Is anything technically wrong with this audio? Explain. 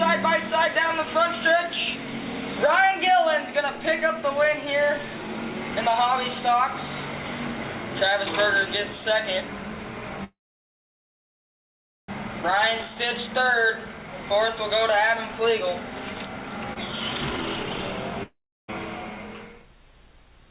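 Yes. There are three timing faults, all from 10.24 s on. The band ends at 4 kHz, which fits a G.711 mu-law call path.

From 10.24 to 12.10 s there is a call audio freeze. The last sound carries on briefly as a fading buzz, then about 1.75 s of silence follows. Packets were likely held up in transit, so the jitter buffer ran empty. The audio resumes where it stopped, about 1.84 s late, with nothing lost.

From 16.73 to 16.78 s there is a short stall from a late packet. One packet missed its slot, so the receiver stretched the last sound by 28 ms until it arrived. A sound is held slightly too long, with a slight buzz or dip. Nothing is skipped.

From 18.23 to 18.72 s there is a long network dropout. The last sound fades out as a brief buzz, then about 0.35 s of silence follows. The audio returns further on. Roughly 0.46 s was never played, likely because no packets arrived for that stretch.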